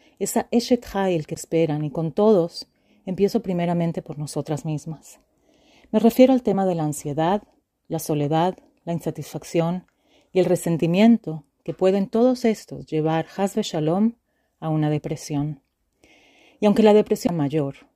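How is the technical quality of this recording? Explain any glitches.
The recording has three glitches: two CD skips and one spot where compressed frames were skipped.

At 1.35 s, just before "y con todos empiezo", and again at 17.27 s, a knock or a flaw made the CD player's laser jump onto a different turn of the disc's spiral. Playback mutes for about 15 ms, leaving a tick, and resumes from a different point in the track.

At 6.53 s, between "refiero al" and "de la ansiedad la", the decoder dropped roughly one frame of compressed audio, either because the frame was missing or because it was rejected as damaged. About 20 ms of audio is lost, which fits a frame length of about 23 ms.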